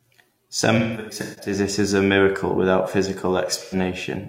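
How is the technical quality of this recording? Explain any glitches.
The recording has two dropout glitches, both AAC frame loss with concealment. From 0.77 to 1.53 s, just before "it as a miracle", the sound turns smeared and phasey in patches. Lost AAC frames totalling about 0.43 s, scattered over roughly 0.6 s with the longest gap near 150 ms, fit about ten dropped frames, and the decoder patched them from the last good spectrum. At 3.64 to 3.75 s, a brief noisy blur covers about 85 ms, pointing to two lost frames filled the same way.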